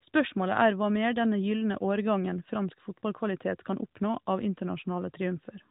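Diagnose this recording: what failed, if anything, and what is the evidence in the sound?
Nothing failed in this recording.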